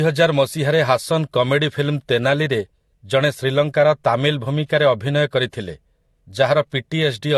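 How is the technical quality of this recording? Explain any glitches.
The quality is limited by one fault lasting the whole clip. Transcoding between lossy codecs, throughout: the speech most likely passed through a Vorbis-like encode and then low-bitrate AAC, stacking both codecs' artefacts and a dull top with nothing above 12.2 kHz.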